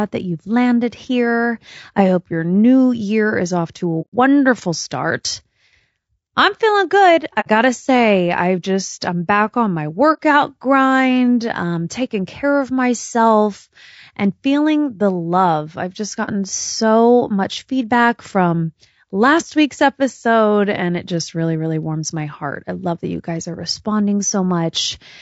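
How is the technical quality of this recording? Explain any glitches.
The recording has plainly audible coding damage throughout and four short dropouts where the sound briefly vanishes.

Throughout, the likely cause is low-delay AAC compression at around 32 kbps. At this low bitrate noise fills in between the harmonics, so the speech sounds rough and grainy with a thin, synthetic top end.

AAC frame loss with muting occurs at 4.01–4.14 s, at 7.40–7.48 s between "I'm feeling good" and "gotta say I've just", at 10.13–10.19 s between "I'm back on my" and "grind um taking care", and at 16.25–16.29 s between "the love I've just" and "so much feedback from". Lost frames are decoded as silence, and the overlapping windows fade the sound out and back in, leaving soft-edged gaps of about 30 to 120 ms.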